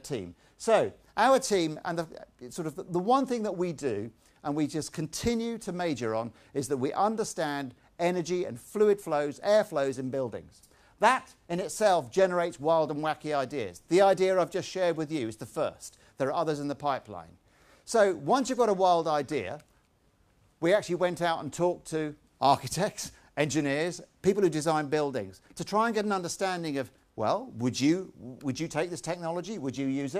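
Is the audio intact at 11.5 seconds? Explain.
Yes, the audio is intact at 11.5 seconds, with no dropout, click, distortion or other fault at that point.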